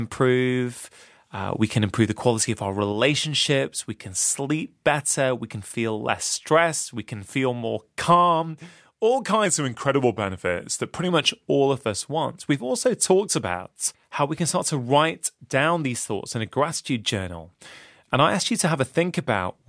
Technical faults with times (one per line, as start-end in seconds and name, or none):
9.46-11.09 wrong sample rate